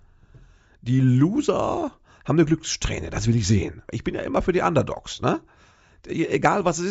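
A speech recording with no audible technical faults. There is nothing to time or trace to a cause anywhere in it.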